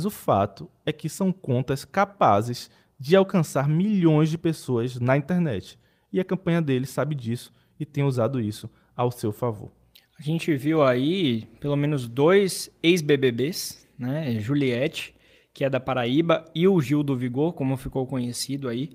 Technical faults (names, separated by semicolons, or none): none